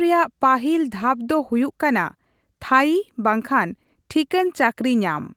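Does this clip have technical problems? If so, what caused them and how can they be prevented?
No, no technical problems here.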